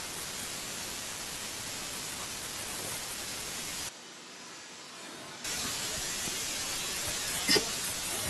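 A switch to a distant microphone runs from 3.89 to 5.44 s in this speech clip: the sound suddenly turns roomy and hollow, thinner in the bass, about 10 dB quieter, with room noise roughly 35 dB below the speech, likely because the close microphone dropped out and a farther one carried the signal until it returned. A loud pop follows at 6.28 to 6.30 s, a single sharp hit peaking roughly 10 dB above the speech, which continues underneath, likely from a brief voltage spike such as a plug, switch or static discharge entering the signal chain.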